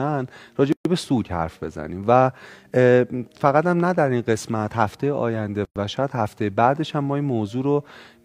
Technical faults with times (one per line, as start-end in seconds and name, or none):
0.72-0.85 gap at a join of encoded pieces
5.65-5.76 gap at a join of encoded pieces